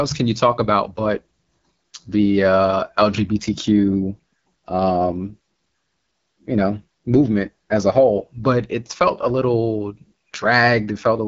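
Throughout, the speech passes through the AMR wideband (HD Voice) codec at a low rate, which fits its 8.85 kbit/s mode, leaving raspy, rough consonants and vowels and nothing above 7.6 kHz.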